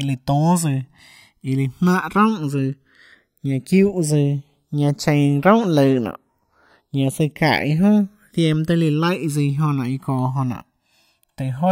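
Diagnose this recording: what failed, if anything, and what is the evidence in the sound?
Converter clocking fault: channels drifting apart. Throughout, the speech takes on a slow flanging sweep. Separate clocks, roughly 200 ppm apart, let interchannel delay creep toward about 1.5 ms.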